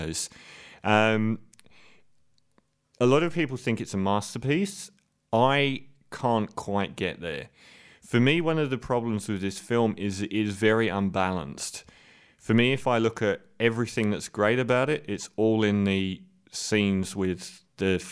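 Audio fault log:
Nothing faulty can be heard in the speech at any point. The log has no timed entries.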